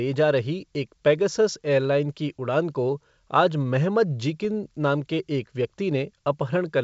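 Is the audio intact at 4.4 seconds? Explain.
No. From 4.42 to 4.46 s there is a pop and a rough, crackly burst with a brief change in level. These are bit errors on an ADPCM link, at a low rate near 0.2 percent. Each flipped bit upsets the decoder's step size and predictor, so the disturbance rings on for a few milliseconds.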